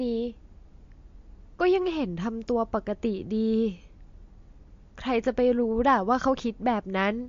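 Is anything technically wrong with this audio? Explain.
Yes. Throughout, the speech is band-limited at 7.2 kHz and sounds watery, likely from MP3 compression at a low bitrate near 44 kbps, which zeroes weak frequency lines.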